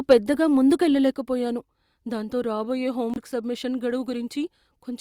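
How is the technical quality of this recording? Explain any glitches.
The recording has several glitches: a brief distortion at the start, two sudden level drops, and one short dropout.

Between 0.10 and 0.13 s, the input was likely driven past the converter's limit by about 4 dB in a microphone overload. Roughly a tenth of the samples in that stretch have flattened tops, giving the loudest sound a harsh, crackly edge.

At 0.13 s and again at 1.14 s, the software likely turned the microphone volume down in a single step each time. The speech and background drop suddenly, by about 3 dB and then about 4 dB.

From 3.14 to 3.18 s, a Bluetooth stall, likely caused by interference holding up packets, let the headphone buffer run dry. The sound cuts out for about 24 ms before resuming.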